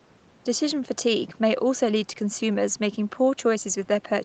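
Nothing here goes wrong: the speech comes across as an ordinary call would, with the top end stopping around 8 kHz and a bit of room noise sitting about 33 dB below the talking.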